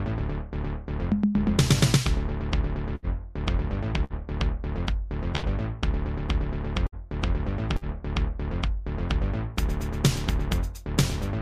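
At 2.95, 4.04, 5.36, 6.86 and 7.76 s there's a burst of packet loss. Each time the receiver stretches the last sound for roughly 50 to 70 ms as a fading buzz or hiss, then jumps ahead, skipping about 60 ms of audio.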